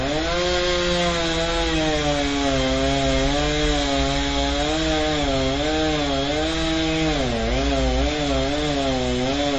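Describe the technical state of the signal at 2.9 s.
At 2.9 s there's MP3 compression across the whole clip, with nothing above 8.2 kHz and swirly, watery detail. That likely comes from starved bits, fitting roughly 32 kbps.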